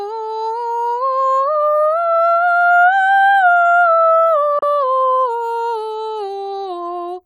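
At 4.59 s the music cuts into a short silent hole, fading out in about 3 ms and returning at 4.63 s. This is a digital broadcast dropout: the receiver muted over a failed frame, and the gap fits a single lost frame of 32 ms.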